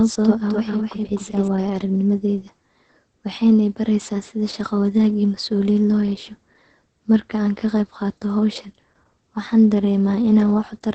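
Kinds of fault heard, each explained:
Opus voice compression: Heavy low-bitrate voice coding across the whole clip, consistent with Opus running its SILK linear-prediction coder at about 10 kbps in 20 ms frames. The band is limited to wideband, with nothing above 8.8 kHz, so the speech lacks top-end air. The excitation is coded coarsely, leaving the voice muffled, hoarse and slightly robotic throughout.
doubled audio track: From the very start to 1.48 s, ending just before "waaya aragnimadayda", the speech runs with a second full-band copy trailing it by roughly a third of a second at about the same level. The copy carries no reverb tail or room colouring and stops abruptly at 1.48 s. This is likely a second capture of the same signal arriving through a slower path and being mixed back in.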